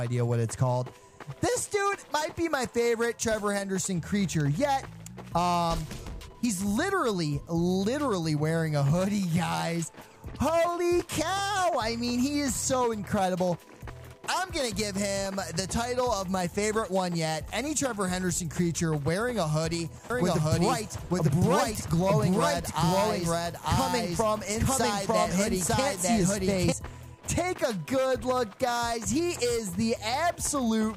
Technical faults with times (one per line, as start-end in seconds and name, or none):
20.10-26.72 doubled audio track